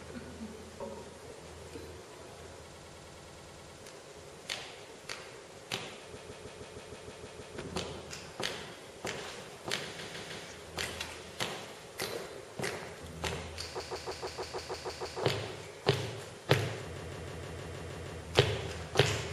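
Five stutters break up the audio, each a short fragment looping in place. The first, 2.72 to 3.76 s, repeats a 104.5 ms slice ten extra times. The others repeat a 156.7 ms slice: nine times at 6.17 to 7.58 s, three at 9.98 to 10.45 s, nine at 13.80 to 15.21 s, and eight at 16.96 to 18.21 s. These are repeated frames, where a run of compressed frames was sent or written more than once and the decoder replays them. The slice lengths fit runs of about four and six frames. Each burst lengthens the audio by its repeated time, from 0.47 to 1.41 s.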